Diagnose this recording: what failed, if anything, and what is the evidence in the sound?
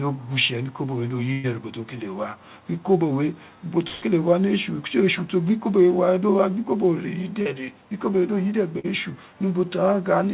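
Burst of packet loss, a network-stage fault: at 1.32 to 1.46 s, and at 3.88 to 4.04 s between "we ubo" and "wa ni", the last sound stretches on and fades for about 115 and 140 ms. Speech then resumes with that stretch missing. These are longer than the short losses, with no silence.

Short concealed packet loss, also at the network stage: at 7.42 to 7.47 s, and at 8.79 to 8.86 s just after "ikobo we do yide", about 40 ms is missing and filled in, heard as a brief smear rather than a gap. It is too short for the held buzz of a burst. The fill sits within the G.711 call band, which has nothing above 4 kHz.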